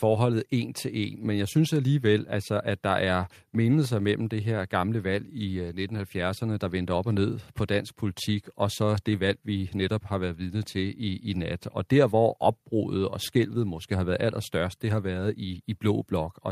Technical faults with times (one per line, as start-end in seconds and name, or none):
none